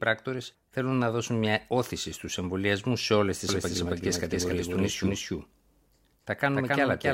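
A doubled audio track begins at 3.49 s, right after "εμβολιασμού σε όλε τι", and runs to the end. A second copy of the speech trails about 300 ms behind at roughly equal level, dry and starting abruptly, likely from a slower second capture path mixed in.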